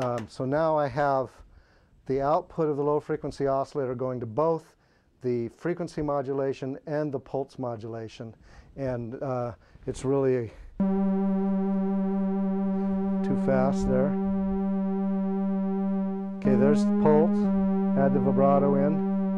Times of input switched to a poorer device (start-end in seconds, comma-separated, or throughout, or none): none